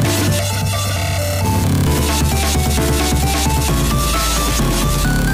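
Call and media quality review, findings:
Channel delay (comb filtering), 0.39 to 1.45 s. Hollow, phasey, thinned sound. Probable component: stereo-to-mono downmix with one channel lagging by about 1.5 ms. Summing cancels shared content at evenly spaced frequencies, first notch near 300 Hz. Fixed comb notches for the whole span.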